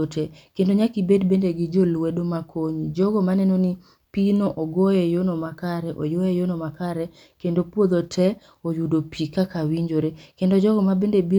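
No technical faults detected.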